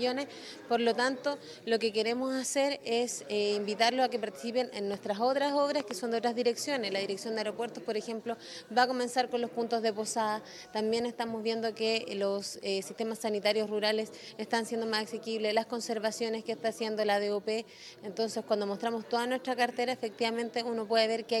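The audio has two loud pops over continuous sound: a single pop from 4.94 to 4.96 s peaking about 5 dB above the signal, then a double pop from 5.80 to 5.93 s, about 15 dB above it. Each is likely a voltage step from a plug, switch or static discharge.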